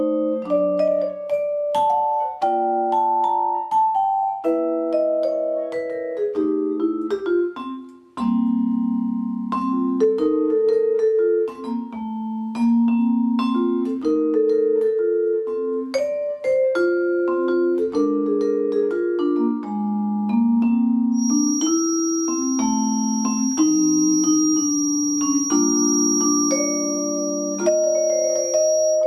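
A feedback whistle runs from 21.10 s to the end of the clip: a thin, steady tone near 5.7 kHz sitting only a little below the main sound, its level slowly swelling and fading. The likely cause is a loudspeaker-to-microphone loop poised right at its feedback threshold, so that this one frequency keeps recirculating and sustaining itself without building into a full howl. It stays pinned at the same pitch throughout.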